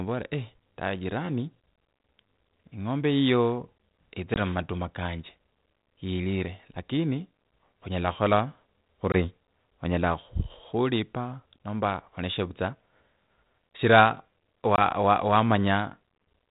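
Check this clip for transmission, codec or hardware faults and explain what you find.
Three short dropouts are audible, all from packet loss on an ADPCM call. They occur at 4.34 s, 9.12 s and 14.76 s. The first falls just before "mumatuma kanje". Each hole lasts about 20 ms, which fits one lost packet, and is filled with silence. ADPCM codes only the difference from an adaptive prediction. After the gap, the decoder's predictor and step size no longer match the sender's. So speech resumes with light distortion. It settles within some tens of milliseconds. The underlying G.726 stream at 32 kbit/s adds only light coding damage.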